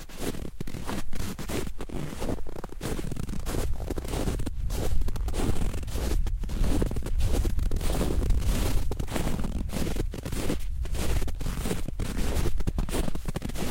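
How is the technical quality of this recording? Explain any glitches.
There's one glitch. From 7.96 to 9.46 s you get a doubled audio track: a second, full-band copy of the sound trailing by roughly a tenth of a second, a few dB quieter, that switches on and off abruptly with no decay, most likely a second capture path running late.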